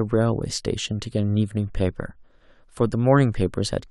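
No technical faults can be heard anywhere in the recording. Nothing in the signal calls for comment at any point in the speech.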